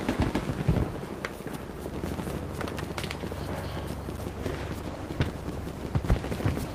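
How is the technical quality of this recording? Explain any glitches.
There's one clear problem near the end. From 4.36 s to the end of the clip, there's a call bitrate drop: the sound turns rough and muffled as the top end disappears, which fits the encoder being pushed from around 40 kbps down to about 18 kbps. It sits at that low rate for roughly 1.8 s without recovering.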